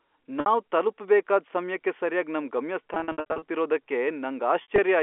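Packet loss with pitch repetition breaks the speech three times. From 0.40 to 0.46 s, just before "ತಲ್ಪುಬೇಕಾದ್ ಸಮ್ಯಕ್ಕೆ ಸರ್ಯಾಗ್ ನಮ್", 60 ms is lost in one run. The receiver loops the last pitch period, so the sound holds briefly with a buzzy tone. From 2.94 to 3.42 s, right after those words, 300 ms drops out in gaps of up to 60 ms. From 4.62 to 4.78 s, 80 ms goes the same way. The gap lengths point to 20 ms packets. Through all of this, the narrow telephone band stays intact.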